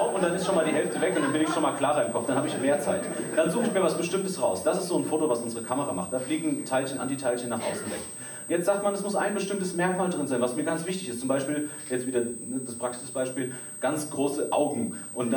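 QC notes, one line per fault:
Throughout, switching supply whistle: a high whistle drifts between 8.18 and 8.53 kHz, roughly 15 dB below the audio, as the power supply's switching frequency shifts within the audible range. On a spectrogram it shows as a thin, wavering line.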